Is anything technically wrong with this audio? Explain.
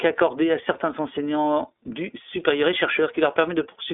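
Yes. Throughout, the speech passes through the iLBC codec. Nothing above 3.8 kHz survives, and each 30 ms frame is coded independently, leaving a rough, synthetic texture that plain telephone band-limiting wouldn't add.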